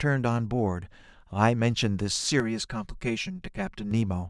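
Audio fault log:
2.40–3.91 s, channel delay (comb filtering): one channel arrives about 5 ms behind the other, and when the two fold to mono the shared sound cancels at a lowest notch near 100 Hz and then at regular steps up the spectrum, so the speech turns hollow and phasey for this stretch. A spectrogram shows evenly spaced dark horizontal bands that stay fixed while the speech moves. The waveform changes little apart from a loss of body.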